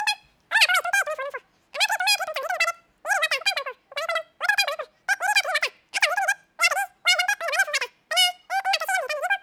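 Throughout, the audio is played back at three times the speed it was captured at without any rate conversion, a wrong sample rate that fits 16 kHz material running at 48 kHz. The speech races by, raised about 19 semitones into a thin, chipmunk-like squeak.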